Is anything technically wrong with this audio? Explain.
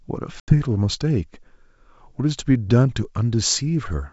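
Yes. Packet loss on an ADPCM call hits at 0.40 to 0.54 s. A few packets, about 80 ms of audio, were lost and filled with silence, leaving the decoder's adaptive predictor and step size out of step with the sender's. The speech drops into a hard-edged gap, then returns slightly distorted before settling.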